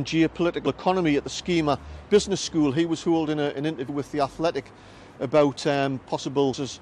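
At 3.88 s and again at 6.53 s, damaged data in a compressed stream makes the decoder lose frame sync, giving a brief glitch, a thin vertical break on the spectrogram.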